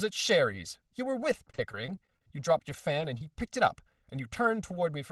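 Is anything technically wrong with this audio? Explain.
Yes. Channel delay (comb filtering) runs throughout. One channel lags by roughly 1.5 ms, so summing to mono cancels evenly spaced frequencies from around 300 Hz. That gives a steady hollow, phasey tone, unlike time-varying flanging.

Repeated packet loss (robotic sound) occurs from 1.32 to 3.21 s. Lost stretches, the longest about 27 ms, are patched by extending the preceding sound, giving choppy speech with pieces missing that is concentrated in one stretch rather than present throughout.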